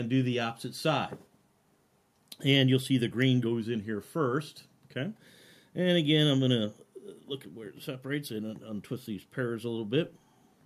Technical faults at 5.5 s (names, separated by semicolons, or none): none